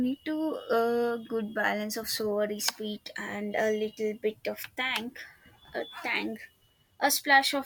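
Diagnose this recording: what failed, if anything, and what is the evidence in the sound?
Nothing failed: no stage between capture and playback leaves any audible trace on this speech recording.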